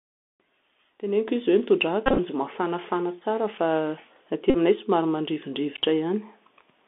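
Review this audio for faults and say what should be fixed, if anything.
The whole clip has the Bluetooth CVSD headset codec on it, and it's plainly audible. The audio sits in a narrow band from about 250 Hz to 3.6 kHz, and the 64 kbps one-bit-per-sample coding that this sound points to can't keep up with fast, loud high content. So s sounds come out scratchy, there's grainy hiss underneath, and peaks get smeared. To prevent it, get the headset onto a wideband mode (mSBC or better) or record on a wired mic.

There are also Bluetooth headset packet repeats, where lost packets got replaced by the previous packet's bits. The first patch runs from 2.06 to 2.20 s. Around 80 ms of audio is lost, scattered across about 120 ms, with runs of up to roughly 20 ms, so you hear a rough buzz near 267 Hz. The second, at 4.50 to 4.56 s, replaces about 41 ms with the same buzz. To prevent it, keep the phone close and clear of 2.4 GHz interference so the link stops dropping packets.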